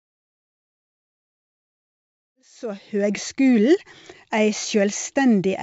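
No faults can be heard in this speech clip.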